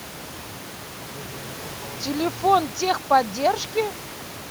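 No technical faults can be heard in this speech recording.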